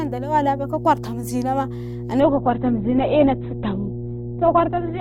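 A steady mains hum runs under the speech from start to finish. It is a low tone at 60 Hz, strong enough to sit only roughly 10 dB below the voice. A ground loop or a nearby transformer is feeding the power line into the signal path. On a spectrogram it shows as an unbroken horizontal line at 60 Hz with some low harmonics stacked above. On the waveform it is a constant low-frequency ripple visible even between phrases.

At 2.2 s the audio switches abruptly to an adaptive stream at a lower bitrate and stays there to the end. The connection slowed, so the player swapped to a leaner encoding without any gap. The treble vanishes, with nothing above 4.1 kHz, and the voice turns dull as codec artefacts rise. The drop fits a move from about 64 kbit/s to about 12 kbit/s Opus. A spectrogram shows the upper band cut off sharply at 2.2 s.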